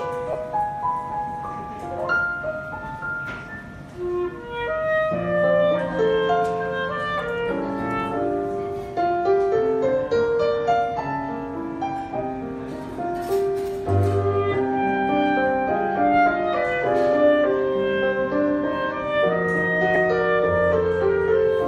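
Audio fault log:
0.33–0.35 s and 19.95 s: lost LE Audio frames. The sound briefly turns to a noisy smear. About 20 ms and 10 ms are missing, which points to two and one 10 ms frames. The LC3 decoder filled each gap by reusing the last spectrum with random signs.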